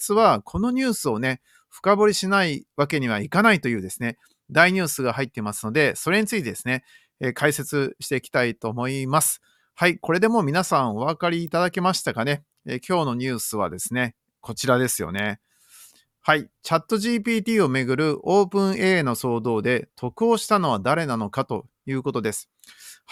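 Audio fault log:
11.47 s and 15.19 s, electrical switching spike: a nearby switch, relay or motor most likely arced briefly, and the audio wiring picked up that burst of interference. Each event is a sharp snap, over in about a millisecond and peaking around -20 dBFS, laid on top of the speech rather than replacing it. Because the disturbance is so short and broadband, it reads as a crisp tick.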